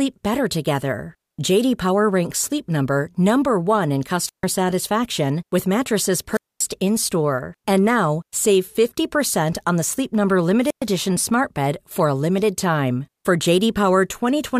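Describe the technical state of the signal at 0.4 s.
At 0.4 s the speech signal is intact, with no dropout, clipping, distortion or other fault present at that moment.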